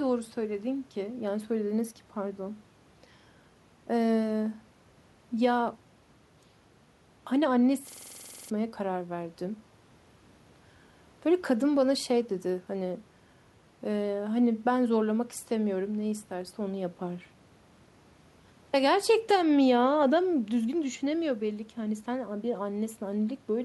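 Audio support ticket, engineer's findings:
System hang loop, 7.9 to 8.5 s. About a 46 ms slice of speech repeats exactly, 13 times, at roughly 21.5 Hz, so you hear a machine-gun stutter. Probable cause is a driver or host stall while the audio device keeps replaying its ring buffer. The loop length fits a 2048-sample buffer. Around 0.7 s of real audio is lost. Check driver and scheduling logs near that timestamp.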